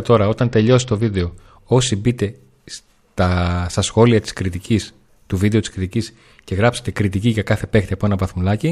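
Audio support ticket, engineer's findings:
Speech clip, one fault, short.

Bluetooth SBC bit pool drop, 0.40 to 1.32 s, recovers right before "όσοι μπείτε στα στα". Dull top end, gritty noise. Phone's SBC encoder starving high sub-bands on a congested link, fits bit pool falling from 31 to 9, about 72 kbps.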